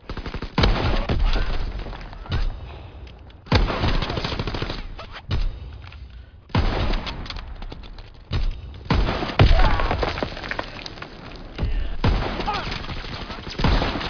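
Aliasing runs through the whole clip: content above 5.5 kHz folds back below it as gritty, metallic tones some 15 dB under the sound. This fits a drop from 48 kHz to 11 kHz without filtering. Unlike clean band-limiting, the spectrum stays busy right up to the edge.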